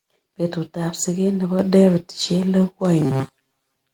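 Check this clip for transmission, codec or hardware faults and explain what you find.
Two faults are audible: a sudden level step in the microphone and a robotic buzz at the end of the clip.

Microphone volume stepped up, at 1.59 s. The speech and the background noise both become louder at once, by about 4 dB, with no fade. Both rise together because the call software judged the input too quiet and raised the device's input gain in a single jump rather than gradually.

Robotic sound from repeated short buffers, from 3.01 s to the end at about 3.94 s. The speech turns rigid and metallic, carrying a steady buzz at 134 Hz that still loosely tracks the syllables. The likely cause is that fresh audio stopped arriving often enough, so the software kept replaying its last short chunk, about 7.5 ms long, while most of the real audio was dropped. Those repeats produce the fixed pitch.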